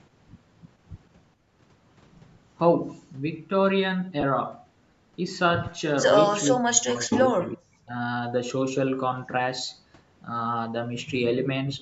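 At 4.21 to 4.23 s, about 20 ms, lost LE Audio frames produce a brief noisy smear. That length fits two lost 10 ms frames, which the decoder filled by repeating the previous spectrum with scrambled phase. This leaves a grainy blur rather than the hard click or silent gap of a plain dropout.

From 6.5 to 7.93 s, the near talker is pulled down deeply for roughly a second and a half. This is likely speech suppressed in double talk by the echo canceller. Unlike frame loss, the level dips cleanly without any smeared, noisy fill.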